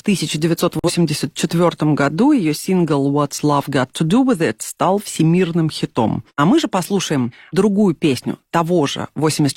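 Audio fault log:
0.79 to 0.91 s, corrupt frame muted: damaged bits in the compressed stream made the decoder reject a frame, and the player substituted silence for it rather than guessing at the missing audio. The speech drops out abruptly into a dead gap of about 115 ms, a length that points to a single lost frame, then resumes on schedule, since the muted span holds the frame's place and the timing does not shift.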